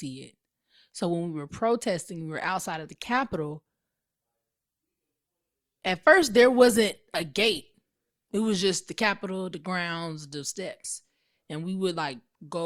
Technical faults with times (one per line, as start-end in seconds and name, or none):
2.37-8.37 adaptive stream at a lower bitrate